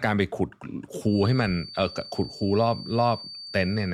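A speech clip with a feedback whistle starting at 1.01 s and continuing to the end: a thin, steady tone near 4.6 kHz, roughly 15 dB below the speech, swelling and fading slowly in level. The likely cause is a loudspeaker-to-microphone loop held just at the point of feedback.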